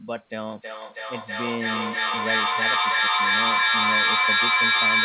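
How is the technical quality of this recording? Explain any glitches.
The quality is poor: from 0.51 s to the end there is a feedback echo between two devices, heard over speech that is already narrowband, with nothing above 4 kHz, which fits a standard telephone codec. Two devices on the same call sit close enough that one plays the other's audio back into that microphone. Each device's echo canceller removes only its own playback, so the sound keeps circulating, returning roughly every third of a second. Each pass sounds thinner and more ringing. Instead of decaying, the repeats build until they peak about 10 dB above the speech. A waveform shows evenly spaced copies that swell rather than shrink. A spectrogram shows the same shapes restacked at regular intervals, smearing into a dense, comb-like wash.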